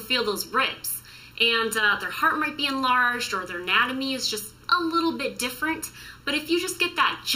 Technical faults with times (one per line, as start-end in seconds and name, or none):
0.00-7.35 channel delay (comb filtering)